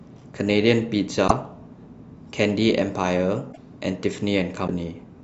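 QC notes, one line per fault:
1.27–1.31 s, 3.52–3.58 s, 4.66–4.69 s: likely a broken MP3 bit reservoir. At each point the speech skips forward with a brief disturbance lasting about 42, 64 and 28 ms, roughly one to three 26 ms MP3 frames. After the cut, each frame reaches back for borrowed data and decodes bytes from the wrong frame. A plain dropout would leave clean silence and resume seamlessly. Here the damage is fixed to the frame grid.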